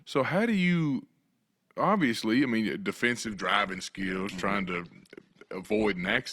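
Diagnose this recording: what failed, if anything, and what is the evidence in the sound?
A network-driven failure: the adaptive stream switched to a lower bitrate at 3.26 s and stayed there to the end. The speech abruptly loses treble above 12.2 kHz and grows codec artefacts, consistent with a step from 64 to 16 kbit/s Opus. Unlike packet loss, there is no gap.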